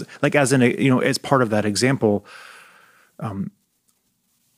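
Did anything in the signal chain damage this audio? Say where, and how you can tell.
No, nothing in the signal chain has damaged this speech recording. No stage between capture and playback leaves anything audible to trace back to it.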